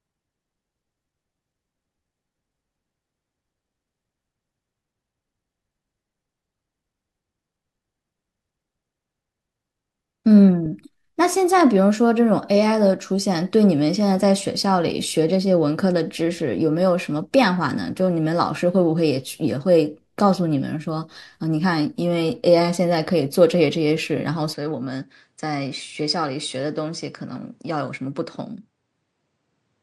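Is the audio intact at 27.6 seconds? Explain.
No. At 27.6 seconds the speech sits inside a stretch from 24.53 s to the end at 29.83 s where the input has likely switched to a poorer device. The sound turns duller and about 5 dB quieter with no gap at the change, and a new noise floor around 50 dB down appears. On a spectrogram, energy above 9.8 kHz stops abruptly at 24.53 s; the waveform's envelope steps slightly lower there.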